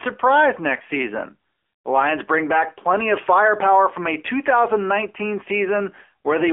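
Throughout the speech, the AMR narrowband mobile codec squeezes the sound into a 300 Hz to 3.4 kHz line band, with nothing above 3.4 kHz. Unlike a plain telephone filter, its sparse pulse-driven vocal-tract model adds a plainly buzzy, synthetic edge, which fits a 7.4 kbps mode.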